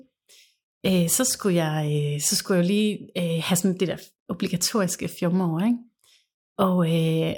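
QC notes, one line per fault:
No fault to note on this speech clip.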